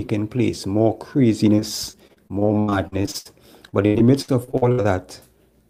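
From 1.55 to 3.27 s and again from 3.69 to 4.86 s, the speech suffers repeated packet loss (robotic sound). Dropouts of up to 85 ms are bridged by extending the preceding sound, leaving roughly a quarter to a third of each stretch patched over, so the speech sounds choppy with pieces missing.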